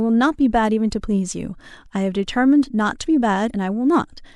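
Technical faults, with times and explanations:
3.46 to 3.51 s, damaged data in a compressed stream: a brief glitch lasting about 44 ms breaks into the speech. Corrupted bytes in the encoded stream made the decoder misread those frames, lose sync and hunt for the next valid frame header.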